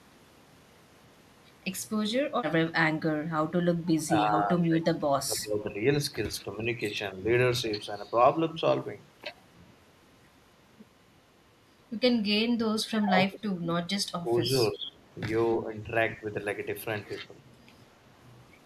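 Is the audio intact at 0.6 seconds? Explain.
Yes, the speech at 0.6 seconds plays through cleanly, with no dropout, click, distortion or other fault at that moment.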